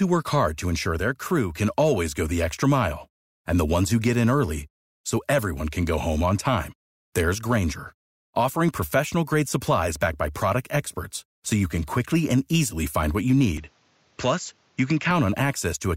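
At 13.58 s the speech turns duller, with nothing above 7.6 kHz and a faint new hiss. It clears at 15.11 s. Likely an input switched to a poorer device.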